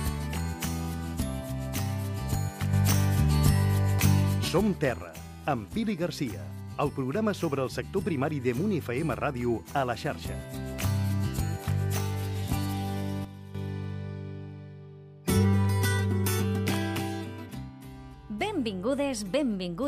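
At 2.73 s a sudden gain jump lifts sound and noise floor together by about 6 dB until 4.48 s, then at 13.25 s a drop of about 10 dB holds until 13.55 s. The waveform shows flat-edged steps, and the spectrogram brightens or darkens across all frequencies at once, likely from gain applied without a ramp.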